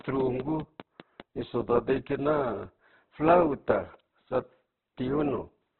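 It's a speech clip. From 0.01 to 1.21 s there's a train of clicks, a regular ticking at about 5 per second, roughly seven pops poking a little above the speech, likely interference or a faulty connection. Throughout, it's heavily damaged by what is likely Opus compression. Nothing comes through above 4.1 kHz, and the grainy, rough texture points to a very low bitrate, around 8 kbps.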